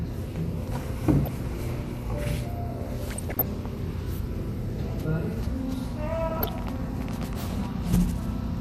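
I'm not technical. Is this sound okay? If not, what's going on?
No, not quite. Two things are going on.

The whole clip sounds dull and plainly gurgly, with a grainy edge on everything. That's what MP2 compression sounds like when it's squeezed too hard, and that's likely the cause here. The format splits the sound into narrow slices and shares out a limited budget of detail. When the budget runs short, the top slices get dropped and the rest get rough, so you lose the sparkle and get that watery texture.

On top of that there's DAB burbling in three spots: a very brief blip around 1.25 to 1.30 s, a longer patch from about 3.08 to 3.42 s, and another from 6.30 to 6.49 s. This is the kind of burbling you hear on digital radio when reception is weak. Corrupted data gets through, so individual slices of the sound get short blips of noise, and it comes out as little splutters over the top.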